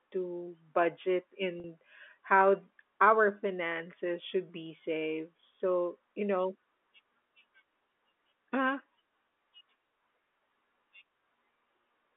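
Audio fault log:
1.60 s: packet loss with pitch repetition. About 40 ms of audio went missing, which fits two lost packets. The receiver filled the gap by repeating the last pitch period. The sound briefly holds with a slight buzz before speech resumes at 1.64 s.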